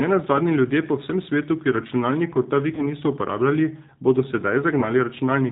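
Throughout, the G.729 codec at 8 kbit/s shapes the speech. It rebuilds each 10 ms frame from a vocal tract filter, a pitch predictor and sparse pulses, so nothing above 4 kHz survives. The voice sounds plainly rough and synthetic, not merely dull as with a simple low-pass filter.

From 2.75 to 2.84 s, between "svetu ki računalnikov ta" and "niso uporabljali bodo", there is VoIP packet loss concealed by the speech codec. About 30 ms of audio is missing, which fits three lost frames. The decoder extrapolates from its last pitch and filter into a fading buzzy tone or coloured noise and then recovers weakly. Because it extrapolates instead of leaving silence, it does not sound like a clean dropout.

At 4.80 to 4.85 s, just after "niso uporabljali bodo", the same concealment covers about 20 ms, which points to two lost frames. The result is a shorter fading smear that stays weak briefly after the gap.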